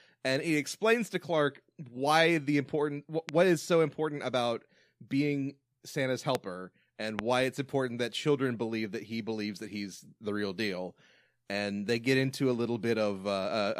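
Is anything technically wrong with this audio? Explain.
Yes. There are three loud pops in this speech. They fall at 3.29 s, between "why the important" and "is so important about", at 6.35 s, and at 7.19 s, just before "why it's important that". Each is a single sharp click, roughly 15 to 20 dB above the speech. A brief voltage spike from a switch, plug or static is the likely cause. The speech continues underneath.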